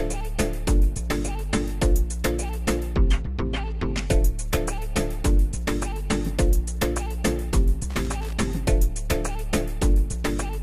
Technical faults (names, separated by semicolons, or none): loose connector crackle